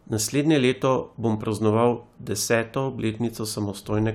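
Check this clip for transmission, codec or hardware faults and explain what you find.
Listening to this speech recording, nothing stood out that would point to a problem in how it was sent, encoded or captured.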